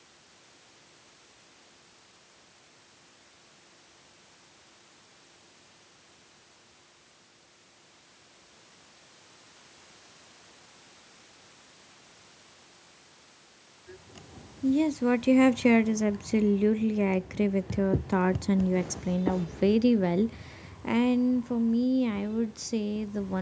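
Automatic gain falling affects this speech: from 14.64 to 16.80 s the gain control eases down by about 6 dB, so the voice and room noise sink together.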